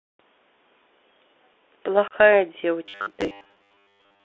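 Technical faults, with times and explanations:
Throughout: Bluetooth CVSD headset codec. The speech is confined to a narrow telephone band of about 300 Hz to 3.5 kHz, with nothing audible above that. The codec runs at 64 kbps and sends one bit per sample, only saying whether the waveform should step up or down, with an adapting step size. Loud, bright sounds change faster than the step can follow and distort. Sibilants come out scratchy, and a granular hiss sits under the speech the whole time.
2.08–2.14 s: unconcealed Bluetooth headset packet loss. About 30 ms of audio drops out in this stretch, which fits a few consecutive headset voice packets going missing between headset and phone. Nothing was patched in to cover the gap, so silence or an idle pattern fills it. The hole has hard edges. On this CVSD link the speech returns briefly quieter while the codec's step size recovers.
2.86–4.25 s: robotic sound from repeated short buffers. 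From here to the end, the speech turns into a rigid, metallic buzz at 100 Hz. The shape of the speech is still roughly traceable, but most of the real audio is gone. This is likely caused by new audio arriving too seldom, with playback filling the gaps by looping the last 10 ms buffer. Repeating a 10 ms block imposes a fixed 100 Hz pitch, and the skipped audio never comes back.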